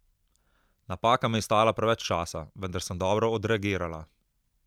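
No technical faults occur at any point in the speech.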